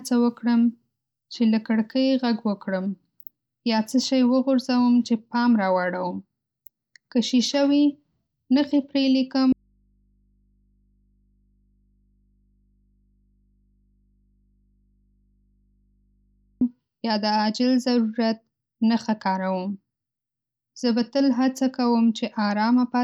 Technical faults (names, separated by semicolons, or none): audio dropout to a faint residue